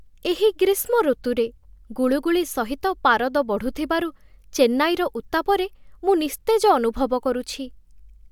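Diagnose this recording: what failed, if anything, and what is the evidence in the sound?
Nothing failed in this recording.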